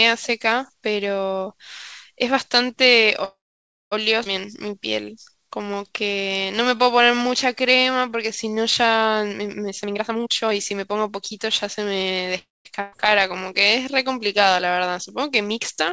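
Call audio freeze, 3.24 to 3.93 s: the speech halts and the receiver stretches the last sound into a brief fading buzz or hiss before about 0.57 s of silence, 0.68 s filled in all. The likely cause is packets held up in transit until the jitter buffer ran dry. When they arrive the speech continues exactly where it stopped, so nothing is lost, but the gap pushes everything after it later.

Skip ahead, at 4.23 to 4.27 s: playback jumps forward with only a 20 ms join. Roughly 0.4 s of speech is gone, dropped while later audio was already queued, and the two sides are spliced almost directly. This also takes back much of the delay the freeze added.

Jitter buffer slow-down, 4.46 to 9.13 s: the speech runs at about 92% speed with unchanged pitch, and sounds are drawn out. To rebuild its reserve the receiver repeated single pitch periods and slivers of pauses many times over, adding 366 ms across the stretch.

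Jitter buffer speed-up, 9.68 to 12.28 s: now the speech runs at about 125% speed, still at the same pitch, and sounds hurried. The buffer held more than its target, so the receiver cut short pieces of one or a few pitch periods repeatedly, removing around 0.7 s.

Call audio freeze, 12.39 to 12.67 s: a second, shorter halt, 262 ms filled, most of it (about 0.2 s) silent after a short fading tail of the last sound. Delayed packets are again the likely cause, and the speech resumes intact once they arrive.

Burst of packet loss, 12.81 to 12.94 s: 120 ms of speech is lost outright. The receiver covers 114 ms by continuing and fading the preceding sound, heard as a held buzz or hiss with no silence, then jumps to later speech with the middle missing. Throughout, the G.722 call path carries nothing above 8 kHz, giving the clip its band-limited top end.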